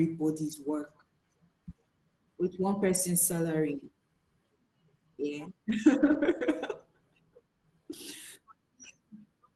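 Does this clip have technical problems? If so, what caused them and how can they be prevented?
Yes. Lost packets rebuilt from error correction at 0.47–0.57 s (60 ms, fitting three packets), 3.31–3.33 s just after "with one person's", and 6.01–6.03 s. Each loss was filled from a low-bitrate copy in the next packet, so the sound turns briefly rough and noisy rather than dropping out or smearing, as plain concealment would. Reducing packet loss on the network, or adding more jitter-buffer headroom and redundancy, prevents it.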